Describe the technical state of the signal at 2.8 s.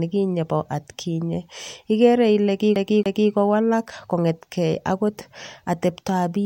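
At 2.8 s the speech falls into a quick, even stutter: the same fragment of about 0.28 s plays twice in a row, each return marked by a brief mute, from 2.76 s to 3.31 s. This is a CD stuck on one turn. A scratch knocks the laser back one track at the same point on each rotation, so the player rereads that short stretch of audio before the disc moves on.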